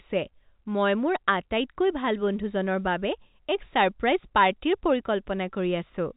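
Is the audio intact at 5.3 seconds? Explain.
Yes, the audio is intact at 5.3 seconds, with no fault to be heard at that moment.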